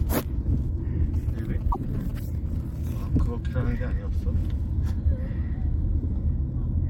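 From 1.14 to 2.11 s, GSM signalling bursts break in. A nearby phone's radio pulses are rectified, giving a galloping dit-dit-dit of short 217 Hz buzzes, roughly 20 dB below the sound.

From 1.71 to 1.77 s, the audio jumps ahead briefly. A broken MP3 bit reservoir is the likely cause. Frames of 26.1 ms decoded with borrowed data from the wrong frame.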